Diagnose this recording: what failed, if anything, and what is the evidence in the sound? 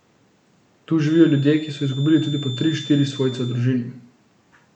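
A feedback whistle sits under the speech from 1.01 s to 3.65 s: a thin, steady tone at 3.5 kHz, about 20 dB below the speech, swelling and fading slowly in level. The likely cause is the acoustic path from loudspeaker back into the microphone, with loop gain hovering just under the point of runaway at that frequency. A howl would grow; an electrical tone or interference would hold perfectly constant. This one neither climbs nor stays rigidly fixed.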